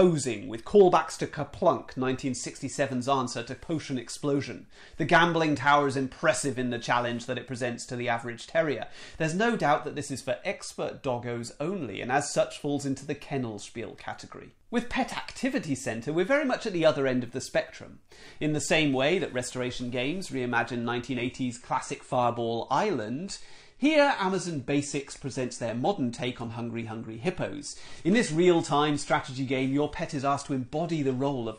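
Around 21.15 s the audio suddenly gets duller and stays that way to the end, with no gap at the switch. That's an adaptive stream dropping to a lower bitrate, presumably because the connection slowed. Nothing above about 9.8 kHz survives from that point, and the codec artefacts get thicker. The character of it fits AAC falling from something like 96 kbit/s down to roughly 32 kbit/s.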